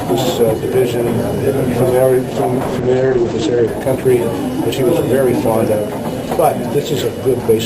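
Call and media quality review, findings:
Call bitrate drop, 2.3 to 4.65 s: sound goes muffled and rough, top end cut to 8 kHz. Fits encoder squeezed from 32 to 10 kbps after bandwidth estimate fell.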